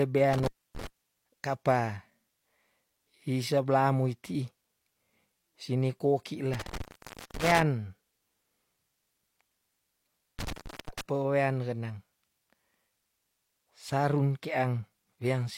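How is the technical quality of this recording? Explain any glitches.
The speech has three dropouts from an intermittent contact, at 0.33–0.87 s, 6.53–7.63 s and 10.39–11.01 s. A loose connection breaks the signal path for about 0.28 s, 0.53 s and 0.35 s, so the audio cuts out, leaving faint hiss, with crackle as the contact opens and recloses.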